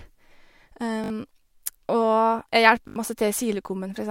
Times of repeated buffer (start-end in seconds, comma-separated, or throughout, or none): 1.04-1.10, 2.88-2.96